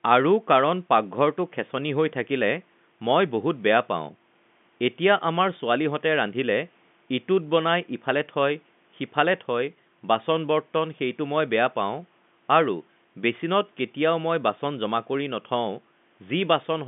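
No fault can be heard in the speech, which sits in a telephone band of about 150 Hz to 3.6 kHz consistent with 64 kbit/s G.711 mu-law coding, with room noise about 40 dB below it.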